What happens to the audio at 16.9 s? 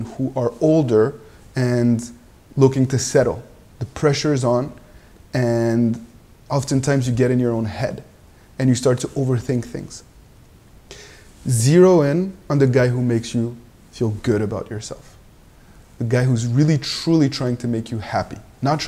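Nothing goes wrong at 16.9 s; the audio runs through that moment intact, with no dropout, click or other fault.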